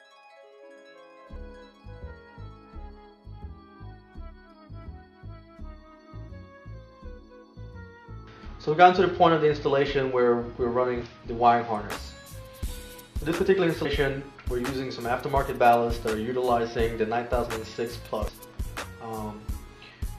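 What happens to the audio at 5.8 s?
Nothing goes wrong at 5.8 s; the audio plays through that moment intact, with no dropout, click, glitch or other fault.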